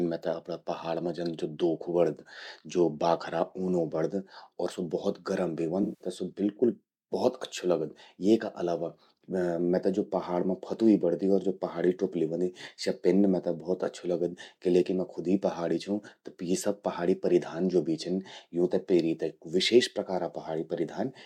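AAC frame loss with concealment occurs from 5.83 s to 6.08 s, between "स्वो भौत गरम भी" and "स्वो बिल्कुल भौत अच्छू". About 171 ms of coded audio never reached the decoder, which fits a run of eight lost frames. The decoder filled the gap by reusing the last good spectrum, randomising its phases or smoothing its energy. The speech there turns into a smeared, noisy, phasey wash before clean decoding resumes.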